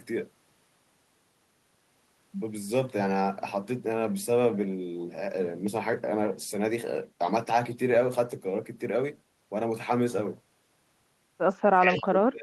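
A speech recording whose final stretch, from 11.61 s to the end at about 12.4 s, shows speech suppressed in double talk: the talker's level collapses, dropping by roughly 35 dB at its deepest, most likely because an echo canceller turned everything down while both sides spoke at once. On a waveform the envelope shrinks abruptly, and a spectrogram shows the harmonics fading and breaking into patches. Between 11.97 and 12.03 s a brief echo leak appears: a faint copy of the voice, about 25 dB below the speech and delayed by 191 ms, likely left behind by a loudspeaker-side canceller that failed to remove it fully, visible as a weak repeat of earlier spectral detail.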